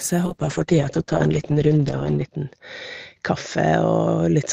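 Speech that turns coarse and muffled from 0.31 s to the end, the mark of a call bitrate drop. The top end narrows from 20 kHz to 8 kHz, fitting an encoder forced from about 32 to 8 kbps. Unlike packet loss, the degradation is steady, with no gaps.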